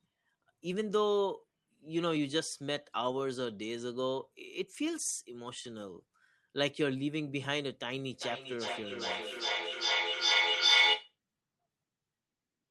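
A speech recording, about 13 seconds long, carries feedback echo between two devices from 8.12 to 11.17 s. Each phrase returns roughly every 400 ms. The repeats build rather than fade, reaching about 7 dB above the speech. A second device is replaying this signal, and its sound re-enters the microphone. No echo canceller can remove a device it doesn't control. Through it all, the call codec's high end stops near 12 kHz.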